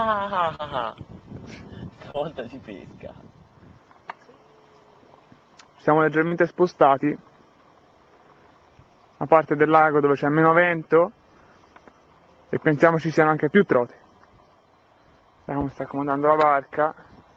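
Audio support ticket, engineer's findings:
Short concealed packet loss at 0.55–0.62 s, 2.11–2.17 s and 6.27–6.34 s. About 40 ms missing each time, decoder concealment bridging 31–35 ms by extending the preceding sound, then crossfading back. Audible as brief smear or wobble. Suspect network path/receiver jitter buffer.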